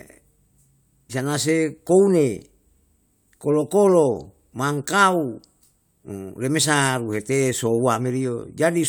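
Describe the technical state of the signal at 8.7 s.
At 8.7 s the signal is intact, with no audible technical fault at that moment.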